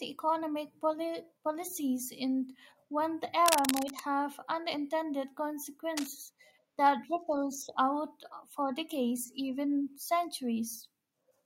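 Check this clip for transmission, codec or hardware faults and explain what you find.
There's a hardware fault here: cable scratch noise in two spots. From 3.46 to 4.00 s, between "policies in one" and "have unintended", dense uneven scratching sits about as loud as the speech. A fainter, shorter burst follows at 5.97 to 6.12 s. The likely cause is a worn cable or connector being moved, with its contact resistance jumping around.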